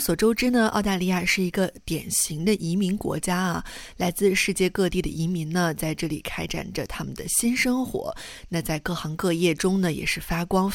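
Nothing in the audio stood out as a fault on listening.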